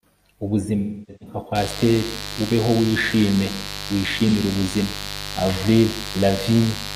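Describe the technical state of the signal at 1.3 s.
At 1.3 s the clip sits inside AAC frame loss with concealment (0.78 to 1.36 s): the decoder repeats the last good spectrum, leaving smeared, noisy speech that shows on a spectrogram as frozen, blurred bands.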